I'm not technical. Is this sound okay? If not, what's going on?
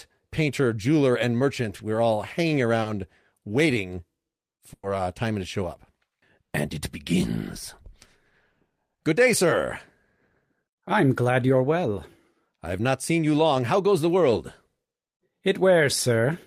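No. It has brief dropouts typical of an internet call.

Around 1.77 to 1.81 s and 2.81 to 2.87 s there is short concealed packet loss. A few hundredths of a second of speech arrived too late. The receiver patched each gap by stretching the previous sound. You hear a tiny smear or wobble.

At 4.73 to 4.85 s there is a burst of packet loss. About a tenth of a second went missing. The receiver held the last sound and let it fade, with a short silence. Then the speech jumps ahead, and a small piece is gone.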